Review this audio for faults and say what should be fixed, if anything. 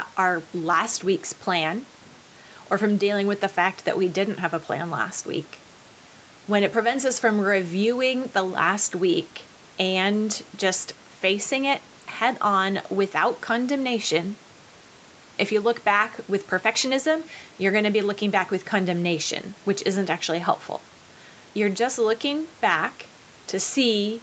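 Nothing needs fixing here, since the speech carries no faults at any point. The microphone processing and the WebRTC call path with its Opus codec leave nothing above 8 kHz, which fits a call path running at about 48 kbps with an 8 kHz audio bandwidth.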